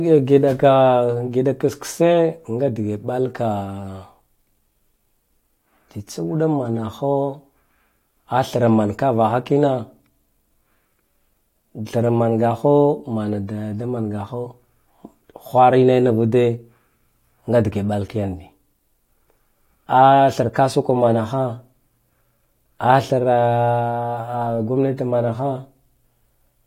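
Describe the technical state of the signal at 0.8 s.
At 0.8 s the speech signal is intact, with no audible technical fault at that moment.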